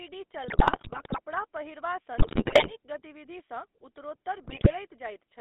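Throughout, the GSM full-rate codec gives a buzzy, gravelly roughness and limits the band to 300 Hz to 3.6 kHz, consistent with a 13 kbps stream. GSM bit errors corrupt the decoder's filter, pitch and gain values at 0.48 to 1.2 s, at 2.18 to 2.72 s just before "गतिविधिसँ उत्तरोत्तर", and at 4.44 to 4.73 s right after it. They break the sound into squawks and gargling.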